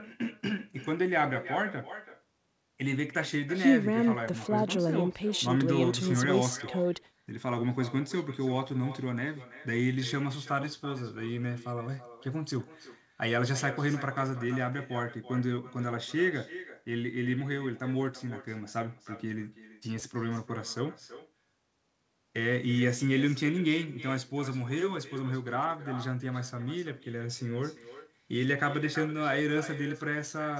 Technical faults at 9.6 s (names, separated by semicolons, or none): echo with no canceller